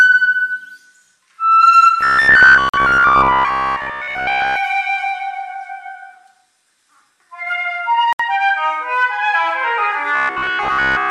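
From 2.01 to 4.57 s and again from 10.16 s to the end, the audio turns into a rigid metallic buzz near 66.7 Hz, robotic sound from repeated short buffers, likely a 15 ms block replayed while most new audio was skipped; a spectrogram shows evenly spaced harmonic lines. Two brief Bluetooth stalls, likely from packets delayed by interference, drop the sound to silence for 45 ms at 2.69 s, inside the first buzzy stretch, and 67 ms at 8.13 s, each visible as a flat gap in the waveform.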